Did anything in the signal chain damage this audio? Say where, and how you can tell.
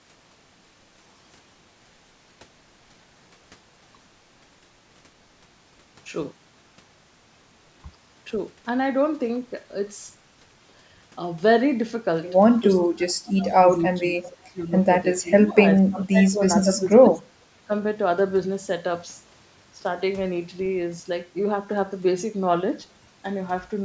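Yes. In the call processing, the echo canceller likely suppressed speech in double talk, ducking the voice by up to about 35 dB at 12.84–13.68, 13.89–14.71, 15.21–15.62, 15.78–16.41, 16.64–17.22 and 17.67–17.71 s.

An echo leak, likely an incompletely cancelled loudspeaker pickup, returns a faint copy delayed 445 ms, about 25 dB below the speech, at 14.23–14.33 s.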